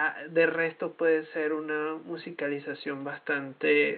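No technical fault can be heard in the speech, with only the recording room's own background noise present at about 38 dB below the speech level.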